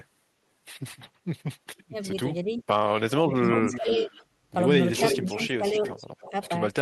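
From 1.9 to 2.6 s, 3.18 to 4.14 s and 5.18 s to the end, the speech dips by up to about 15 dB. This is speech suppressed in double talk, likely an echo canceller turning down its own talker along with the loudspeaker echo. An echo leak runs from 2.57 to 4.24 s and from 4.94 s to the end. It is a copy of the speech delayed 328 ms, about 10 dB and then about 5 dB below the direct signal, likely loudspeaker pickup the canceller missed.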